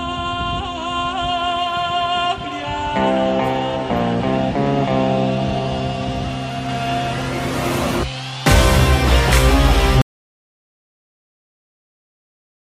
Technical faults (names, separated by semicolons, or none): audio dropout to silence